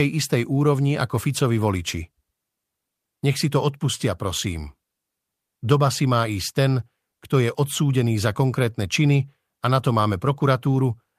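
No audible technical fault turns up anywhere in the recording; the speech signal runs its whole course without a dropout, click, glitch or other transport or processing defect to report.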